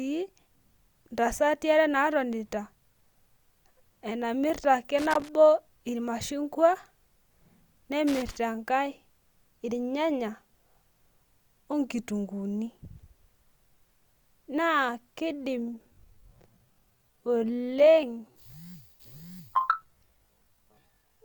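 At 4.99 to 5.29 s and again at 8.07 to 8.37 s there is loose connector crackle, two irregular bursts of scratchy crackle about 0.3 s each. A worn or dirty contact is making and breaking as it shifts, chopping the signal on and off, with pops where any DC offset jumps. On a waveform these show as ragged dropouts and sharp spikes; a spectrogram shows scattered vertical broadband streaks.

From 15.58 s to the end, the audio becomes a time-stretched section. The pace abruptly slows to about 0.55 times normal while pitch stays the same, so the speech drags. This is likely software lengthening the audio by repeating short fragments. On a spectrogram, formant and harmonic patterns stretch horizontally with faint repeated blocks; the waveform shows elongated, duplicated-looking segments.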